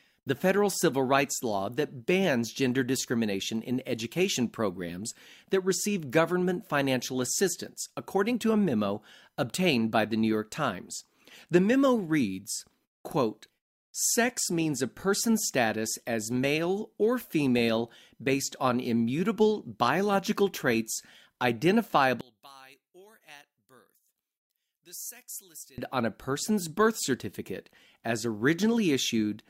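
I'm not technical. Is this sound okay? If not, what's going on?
No. From 22.21 to 25.78 seconds there is what sounds like one channel inverted: the speech suddenly drops to a faint trace, then returns at full strength. The likely cause is that one side of the stereo recording has been flipped upside down, so its wave pushes while the other pulls. When both sides are combined into one, as on a phone speaker, the centred voice cancels itself out, leaving only small leftover differences.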